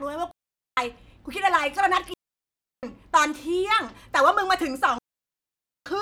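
A digital wireless link loses too much data three times, and each time the receiver mutes rather than passing on corrupted audio. The result is a digital wireless dropout in the speech: clean holes of near silence from 0.31 to 0.77 s (0.46 s), 2.14 to 2.83 s (0.69 s), and 4.98 to 5.86 s (0.88 s). Each mute fades in and out very quickly, with no crackle or noise burst at either edge.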